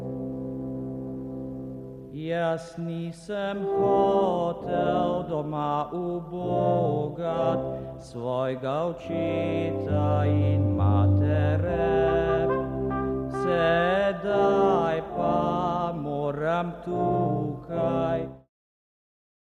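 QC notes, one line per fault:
Nothing stood out on listening, and the level eases away in a smooth fade-out that finishes at 18.5 s.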